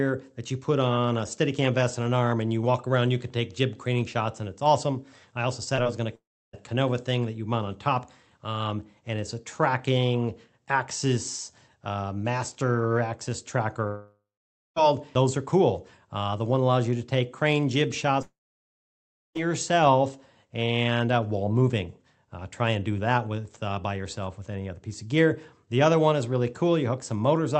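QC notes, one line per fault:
5.75 s and 5.83 s: short concealed packet loss. Two 20 ms gaps were filled by extending the preceding sound, heard as brief smears.
6.15–6.55 s, 13.87–14.78 s, 18.22–19.40 s: likely long network dropout. A fading buzz gives way to silence of 0.31, 0.53 and 1.02 s. Audio resumes with material missing.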